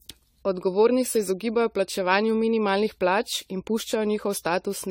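Swirly, hollow and smeared speech from start to finish, with blurred consonant attacks and content reaching up to about 20.1 kHz. The likely cause is generation loss: the audio seems to have been re-encoded about seven times through a lossy codec resembling 64 kbit/s AAC-LC, stacking quantisation noise with each pass.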